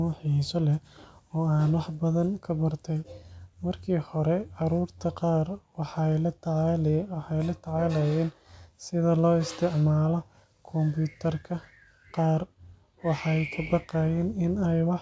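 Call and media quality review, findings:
No faults heard.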